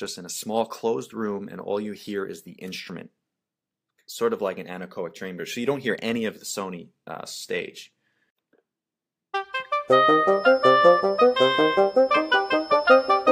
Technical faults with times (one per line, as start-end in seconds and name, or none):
10.27-13.31 feedback whistle